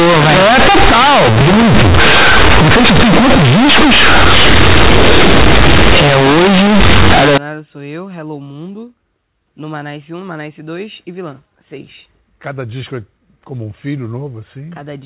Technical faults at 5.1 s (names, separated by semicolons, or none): companded audio read as linear